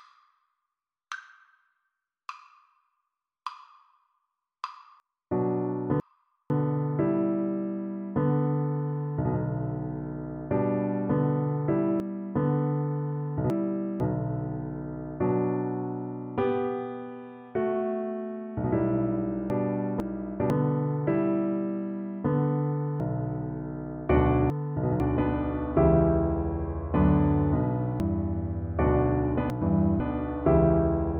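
Jumbled stretches at 5.0–6.5 s, 12.0–14.0 s, 19.5–20.5 s, 23.0–25.0 s and 28.0–30.0 s are chunks out of order. In each, a 500 ms block plays one to three blocks late, leaving three hard joins.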